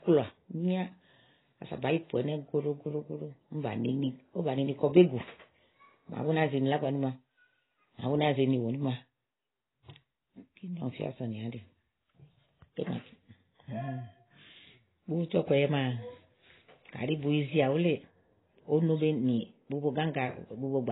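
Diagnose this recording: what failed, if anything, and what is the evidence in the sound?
The codec stage is the likely culprit, with heavy AAC compression at a very low rate, which fits AAC-LC at around 16 kbps. The speech has nothing above 3.9 kHz throughout, so it sounds dull and smeared, with a warbling, fizzy texture on sustained sounds and sibilants.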